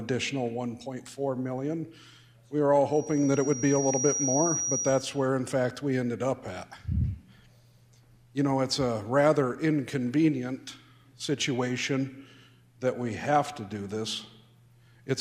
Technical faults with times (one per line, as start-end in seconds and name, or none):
2.93-5.28 loudspeaker feedback squeal